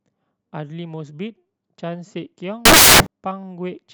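Samples built from the wrong bytes hit between 2.65 and 3.06 s: misassembled bytes turn the speech's low-order bits into loud, harsh broadband noise.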